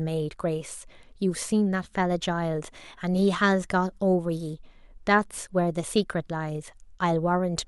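No technical faults are audible.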